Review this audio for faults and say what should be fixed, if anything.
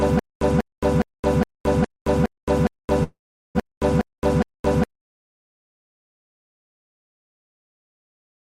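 A stutter with silent gaps is already under way when the clip begins and runs to 4.84 s. The same 0.19 s burst replays ten times at a steady 0.41 s period, each copy followed by about 0.22 s of digital silence. The likely cause is a stalled player or stream that replays its last fragment on every retry and then runs dry, so the audio due in those gaps is lost. On a waveform this appears as identical blocks separated by flat lines. A spectrogram shows repeated vertical slabs with fully black columns between them. Adding more buffering ahead of playback, and muting instead of replaying on underrun, would prevent it.

A call audio freeze runs from 3.03 to 3.57 s. For about 515 ms the receiver fills in with a stretched copy of the last sound, which fades away and leaves roughly 400 ms of silence. The audio then resumes where it stopped, so nothing is missing, but everything after this point arrives about 515 ms late. 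The likely cause is a jitter buffer that emptied while packets were held up in transit. A waveform shows a decaying smear followed by a flat stretch. A spectrogram shows frozen, smeared horizontal bands that fade out. A larger adaptive jitter buffer and a steadier network path would prevent it.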